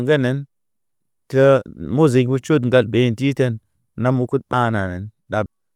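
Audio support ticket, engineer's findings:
Compressed frames skipped at 4.53 s and 5.46 s in the speech. Jumps of about half a second and about 0.4 s, which fits roughly fifteen and ten lost 32 ms frames. Decoder dropped missing or damaged frames.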